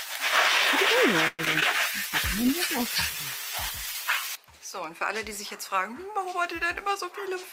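At 1.27 s the sound stalls. The last moment is stretched into a fading buzz that includes about 10 ms of silence, and after 1.41 s the audio resumes where it stopped, now running about 114 ms late. This is likely a call audio freeze: packets were delayed in transit, the jitter buffer emptied, and the receiver extended the last sound until data arrived.

Two short concealed packet losses follow, at 1.45 to 1.48 s and 1.60 to 1.64 s, each heard as a brief smear or wobble. In the first, 40 ms of audio never reached the decoder and only about 11 ms was synthesised to cover it, so the stream skips ahead and recovers roughly 30 ms of the earlier delay. In the second, 20 ms was lost and 16 ms was filled by continuing the preceding sound.

From 1.85 s to 5.53 s a call bitrate drop takes hold. The bandwidth estimate fell and the encoder went from 64 kbps to 19 kbps, staying at the lowest rate for 2.33 s. 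With far fewer bits, the coding becomes coarse and the sound turns rough and watery until the rate recovers.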